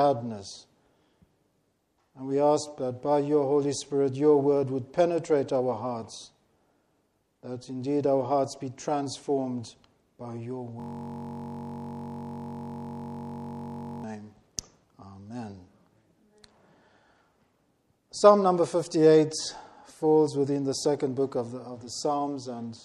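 From 10.80 to 14.04 s a system hang loop repeats one 21.33 ms slice, consistent with a 1024-sample buffer, producing a steady 46.9 Hz buzz.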